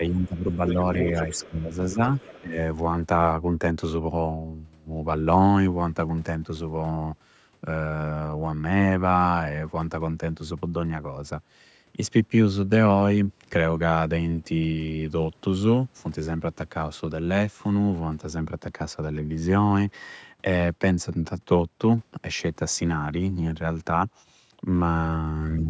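Right from the start, 0.0 to 0.79 s, the speech dips and partly drops out, sinking by around 15 dB for about half a second in total. This is speech suppressed in double talk, with the same chopping at 1.46 to 2.0 s, briefly at 2.41 to 2.57 s, and faintly, only a few decibels, at 25.6 s to the end. The likely cause is an echo canceller that could not tell the talker from the far-end voice and turned both down together.

Overlapping these dips, a second voice can be heard underneath, from 0.25 to 1.48 s at roughly 15 dB below the speech, and again more faintly, about 25 dB down, from 1.9 to 2.41 s. This is the other side's voice leaking through. It is likely far-end audio played on the talker's loudspeaker that the echo canceller failed to remove fully from the microphone. The call processing caps the band at 8 kHz.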